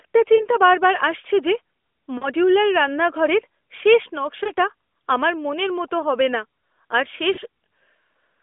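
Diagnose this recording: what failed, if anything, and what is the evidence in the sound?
Lost AMR speech frames on the radio link: brief warbling dips at 0.36, 2.18, 4.44 and 7.34 s, where the decoder repeats the last good frame with fading gain.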